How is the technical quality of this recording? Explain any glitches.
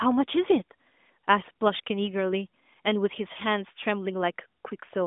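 No glitches turn up anywhere in the recording. The speech comes through the AMR narrowband mobile codec at telephone bandwidth, roughly 200 Hz to 3.6 kHz with nothing above about 3.8 kHz, and its light coding colour fits the codec's highest 12.2 kbps mode.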